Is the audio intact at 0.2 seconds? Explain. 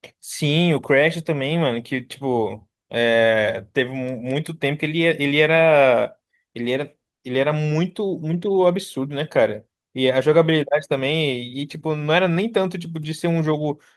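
Yes, at 0.2 seconds the speech is intact, with no dropout, click, distortion or other fault to be heard at that point.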